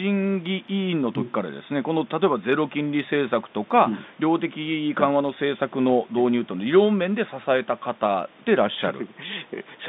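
No faults can be heard anywhere in this speech.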